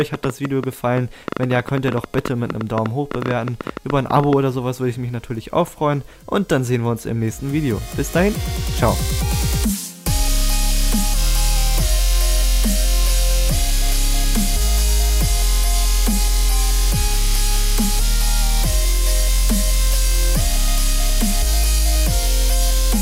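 Something in the signal chain, likely interference from nearby equipment, a faulty connection or a power supply problem, injects a train of clicks from the very start of the audio at 0.01 s until 4.34 s. Around fifty similar pulses arrive at an uneven pace, averaging about 10.2 per second, and rise about 10 dB above the surrounding sound. The result is an irregular ticking or popping laid over the opening four seconds of the clip.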